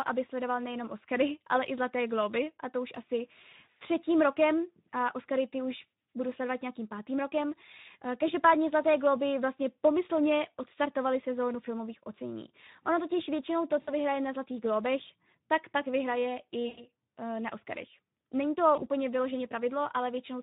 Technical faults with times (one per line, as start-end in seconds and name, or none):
0.00-20.43 Speex codec
13.81-13.91 VoIP packet loss concealed by the speech codec
16.67-16.88 VoIP packet loss concealed by the speech codec
18.75-18.84 VoIP packet loss concealed by the speech codec